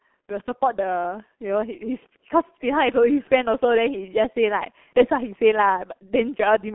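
From start to finish the speech carries heavy G.723.1 codec damage: 30 ms frames and a slowly updated voice model leave it muffled and hoarse with smeared consonants, consistent with roughly 6.3 kbit/s. A spectrogram shows energy confined to about 200 Hz–3.4 kHz, empty above 3.8 kHz.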